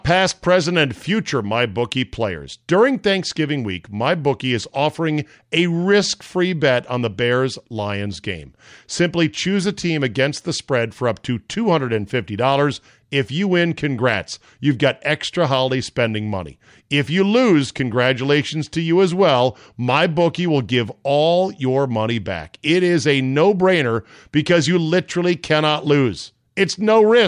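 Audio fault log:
Nothing stood out on listening to this speech recording.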